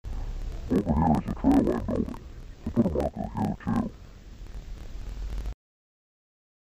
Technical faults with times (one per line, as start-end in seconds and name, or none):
0.00-6.64 interleaved audio read as planar